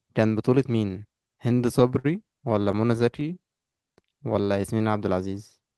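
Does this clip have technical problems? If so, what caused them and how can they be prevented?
Yes. Between 1.19 and 2.06 s the speech shows repeated stalls (stutter): nine short halts where packets arrived late, the jitter buffer ran dry, and the receiver extended the last sound to bridge about 129 ms in total, the longest wait 55 ms. A second run from 2.42 to 3.23 s has eight briefer halts, none over 19 ms. Unlike packet-loss dropouts, nothing is skipped; the speech picks up exactly where it stopped. A steadier network path or a somewhat deeper jitter buffer would prevent this.

From 3.27 to 4.99 s a jitter buffer slow-down follows: to rebuild its reserve, the receiver repeated individual pitch periods and slivers of pauses, adding about 214 ms and playing that stretch at 88% speed. The pitch stays put, which separates it from a tape-style slowdown, and the drag is smooth and continuous rather than broken into halts as in the stutter before it. 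Reducing network jitter, so the buffer never runs low enough to need rebuilding, would prevent it.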